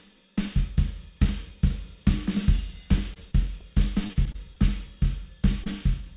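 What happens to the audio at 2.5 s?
Nothing goes wrong at 2.5 s; the audio passes through that moment intact, with no dropout, glitch or other fault.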